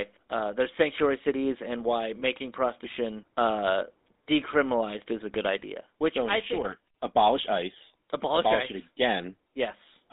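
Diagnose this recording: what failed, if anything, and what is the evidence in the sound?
At the codec stage, the speech passed through the GSM full-rate codec, consistent with a 13 kbps stream. It is band-limited to 200 Hz–3.7 kHz, with plainly audible buzzy, gravelly roughness throughout.

At the network stage, one GSM frame of about 20 ms was lost and concealed by repeating the previous frame. This leaves a brief metallic ring at 2.20–2.23 s, between "sanctuary cities and why" and "prostitution uh decriminalized is".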